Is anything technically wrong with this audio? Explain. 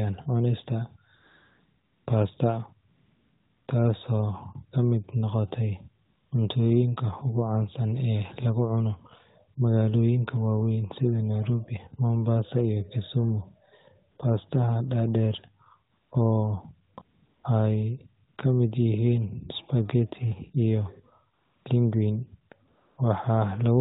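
Yes. AMR comfort noise appears ten times between 1.16 and 22.98 s, lasting 40 to 900 ms, including a gap ending just before "cuntooyinka ugu". The phone judged those pauses silent and stopped sending speech frames, so the receiver filled them with smooth synthetic hiss. Unlike a dropout or noise gate, the pauses are filled rather than silent, with a noise that switches in and out against the narrowband speech.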